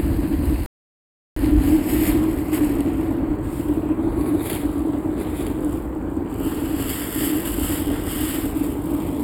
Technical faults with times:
0.00-9.23 channel delay (comb filtering)
0.66-1.36 playback stall

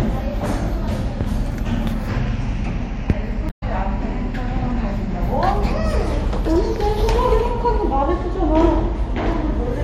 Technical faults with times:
3.46-3.63 damaged data in a compressed stream

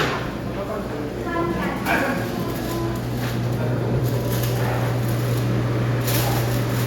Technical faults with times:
none

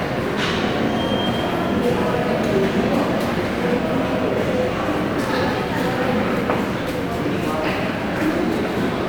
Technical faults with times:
none

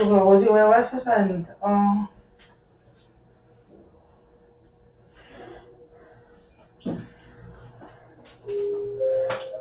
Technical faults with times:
0.00-9.61 noise suppressor applied to music or sounds
2.16-5.16 sound cut by the noise suppressor

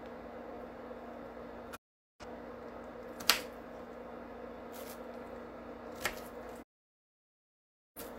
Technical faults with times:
1.75-2.25 digital broadcast dropout
6.61-8.01 digital broadcast dropout

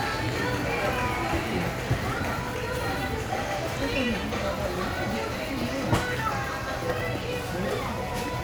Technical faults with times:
none

